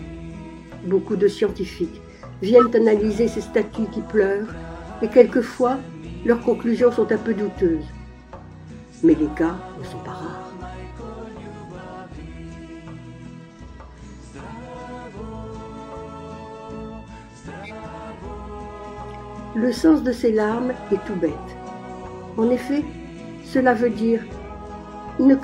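At 2.59–2.67 s and 17.63–17.71 s, a corrupt frame decoded: bit errors in one frame misplace energy, giving a brief artifact, loud first, faint later, seen as an 80 ms off-frequency spectrogram block.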